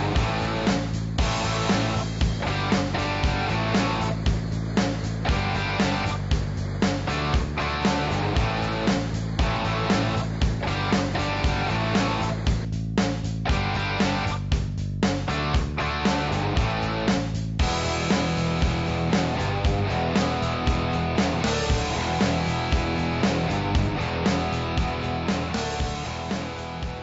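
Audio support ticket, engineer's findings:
Listened through in full and nothing stood out; no audible faults found.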